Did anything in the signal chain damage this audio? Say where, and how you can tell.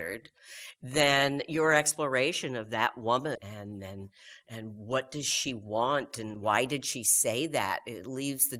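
Yes. At the network and jitter-buffer stage, there is a skip ahead at about 3.35 s. Right after "your exploration of that", playback lands on "and and" with no gap, no silence and no concealment noise. Roughly 0.4 s of audio is gone, and the two sides are butted together. That seamless join is what separates it from a packet-loss dropout, which would leave a hole or a smeared, concealed patch.

The same jitter buffer then applies a speed-up from 5.51 to 6.31 s, between "what does" and "why did she". Speech runs at about 109% for that stretch and sounds hurried, while the pitch stays where it was. That points to the receiver trimming short pitch-period slices, around 70 ms in total, to drain excess delay. A clock or resampling mismatch would raise the pitch along with the tempo. Here only the pace changes.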